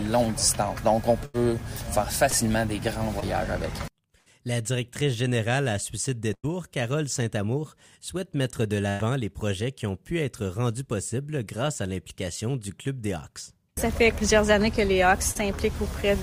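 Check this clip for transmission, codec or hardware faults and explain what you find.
The clip has two kinds of network fault: four bursts of packet loss and three short concealed packet losses.

At 1.25–1.36, 4.18–4.28, 6.34–6.45 and 8.89–9.01 s, the sound stalls into a held buzz or fading hiss, then jumps ahead. These are bursts of packet loss: 80 to 100 ms went missing, and the receiver stretched the last sound while turning it down.

At 2.30–2.34, 3.20–3.24 and 15.31–15.37 s there are brief smears or wobbles. These are short concealed packet losses: 20 ms (40 ms at the last one) never arrived in time, and the decoder continued the preceding sound before blending back in.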